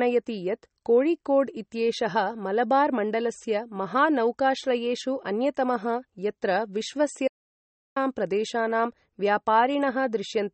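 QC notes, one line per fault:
Throughout, MP3 compression: the encoder was likely starved of bits, at a rate that points to about 32 kbps, so it dropped weaker frequency lines that flicker on and off between frames and cut everything above 8.4 kHz. The damage is plainly audible: the speech takes on a watery, swirling quality, sibilants turn metallic and chirpy, consonant onsets smear, and the top end sounds dull because nothing above the cutoff remains.
7.28 to 7.96 s, audio dropout to silence: the input signal was lost for about 0.68 s, likely from a disconnected device, a failed link or a stray mute, while recording carried on writing silence. The speech breaks off mid-flow and resumes abruptly. The gap is dead silent with no room tone underneath, and whatever was spoken during it is gone.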